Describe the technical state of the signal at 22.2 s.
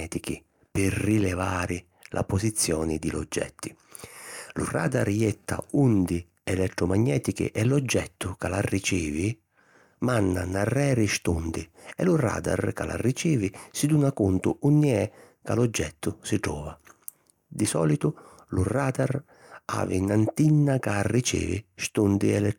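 At 22.2 s the speech signal is intact, with no dropout, distortion or other technical fault audible at that moment.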